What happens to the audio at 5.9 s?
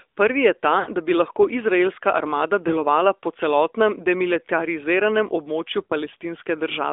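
Around 5.84 to 5.93 s you hit lost AMR speech frames. Roughly 60 ms of signal got dropped, which fits three 20 ms frames. The decoder papers over the hole by replaying the last good pitch and vocal tract settings at falling gain, so you get a short smeared, warbly patch that sags toward silence before the sound picks back up a little rough.

Underneath that, the whole clip carries AMR narrowband mobile codec coloring. It's band-limited to roughly 300 Hz to 3.6 kHz, with plainly audible buzzy, synthetic artifacts consistent with a mid-rate mode around 10 kbps.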